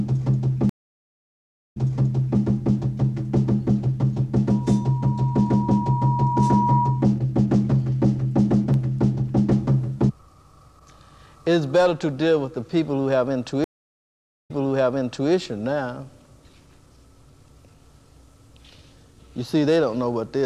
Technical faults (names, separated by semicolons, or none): stream reconnect; loudspeaker feedback squeal